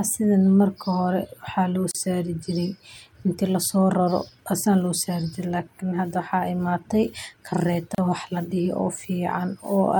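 At 1.91 to 1.95 s the speech drops into a silence of about 34 ms, then resumes exactly where it stopped; the same gap at a join of encoded pieces recurs at 7.95 to 7.98 s, 6.0 s later. The segments were encoded separately and concatenated untrimmed, so each join keeps one piece's end padding and the next piece's start-up delay. The edges are smeared by the codec.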